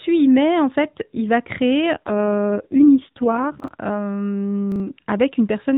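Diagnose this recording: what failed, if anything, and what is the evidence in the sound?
The fault is an AMR rate drop in the network and codec stage. Right after "fait il va créer", at 1.94 s, the speech turns rougher and more synthetic and stays that way until 3.81 s. The bandwidth holds at the narrowband 4 kHz limit with no gap, which fits the link adapting from the 12.2 kbps mode down to the 4.75 kbps mode, spending bits on error protection instead of on the excitation pulses.

There are also chunks out of order, from the buffer or storage stage. At 3.60 to 3.68 s and again at 4.72 to 4.80 s, there is a short jumbled moment. Each is consistent with a 40 ms block arriving one chunk late and playing after its successor. No audio is missing, but the swapped order creates three hard joins per event.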